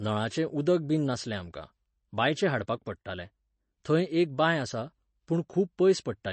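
MP3 compression runs through the whole of this speech clip, from start to finish, and is the likely cause of what is heard: the audio stops dead above about 8.3 kHz, and coding damage is plainly audible throughout. That pattern fits an encoder starved of bits, around 32 kbps, which discards the treble above a fixed cut-off and drops quieter spectral detail it judges unimportant, leaving the speech dull and audibly processed.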